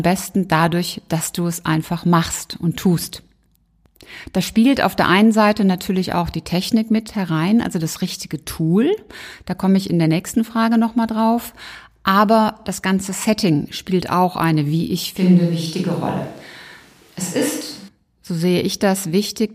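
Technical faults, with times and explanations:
15.17–17.88 s, switch to a distant microphone: speech turns roomy, hollow and thin, level barely changes, noise sits about 35 dB down, likely a farther microphone briefly used.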